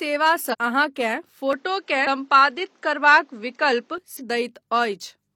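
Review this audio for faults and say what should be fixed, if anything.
Compressed frames skipped at 0.49, 2.03 and 4.16 s: the sound jumps roughly 300 ms ahead, as whole 42.7 ms frames go missing. Check file integrity and the transport.

From 1.53 to 3.98 s the top end stops near 7.9 kHz and the level shifts a few dB with faint new background noise, likely because the input switched to a poorer device. Lock the recording input.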